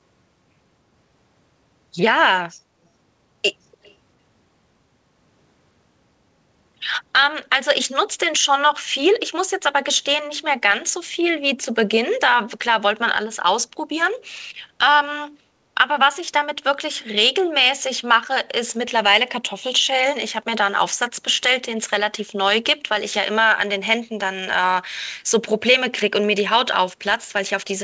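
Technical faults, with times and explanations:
3.74–3.95 s, echo leak: a very faint copy of the speech returns 291 ms late, likely loudspeaker sound the far end's echo canceller missed.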